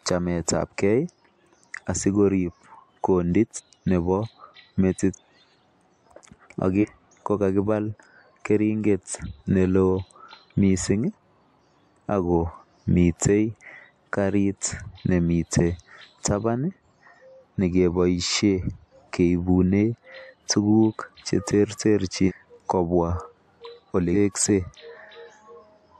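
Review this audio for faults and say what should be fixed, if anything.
Compressed frames skipped at 3.55–3.60 s (right after "asikorib kondit", about 200 ms lost), 5.13–5.18 s (about 500 ms), 6.81–6.85 s (about 400 ms), 22.27–22.32 s (about 500 ms) and 24.13–24.16 s (about 300 ms). Whole frames of the compressed stream never reached playback, so the speech leaps forward by a multiple of the frame length, which fits frames of about 46 ms. On a spectrogram, harmonic traces and formants jump abruptly at a thin vertical seam. On a waveform, the amplitude envelope changes suddenly with no silent gap. To prevent it, check the file's integrity after transfer and make sure the decoder gets complete, undamaged frames, using error-protected transport or retransmission where frames could be lost.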